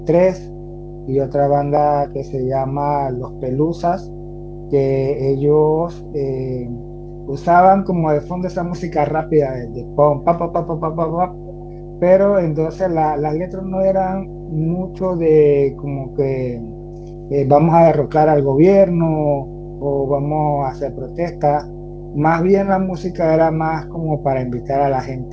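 Speech carries a 50 Hz mains hum for its whole length, strong at roughly 10 dB below the speech. A ground loop or nearby transformer is feeding the power line into the signal. On a spectrogram it is a solid horizontal line at 50 Hz with fainter harmonics stacked above. Echo leak appears at 11.34 to 11.78 s, 21.71 to 22.03 s and 25.23 to 25.31 s as a faint copy of the voice trailing by 220 ms, weakest in the last two. The likely cause is a loudspeaker on the far end whose echo canceller let residue through. On a spectrogram these show as dim, smeared repeats of the preceding speech patterns, shifted right by about a fifth of a second. The spectrum stops sharply at 8 kHz, which fits a wideband call codec.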